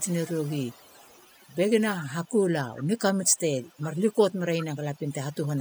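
Overdone noise removal runs through the whole clip. The noise reduction was set too hard. Frequency bands near its noise estimate are cut away, and soft parts of the speech go too. The background drops and breaks up into twinkling specks.

An echo leak is heard from the start to 1.56 s, and again from 2.01 s to the end. A delayed copy of the speech trails it by about 0.4 s. It sits about 30 dB below the speech at first, then about 25 dB below. The likely cause is an echo canceller on a loudspeaker side that left part of the picked-up sound in place.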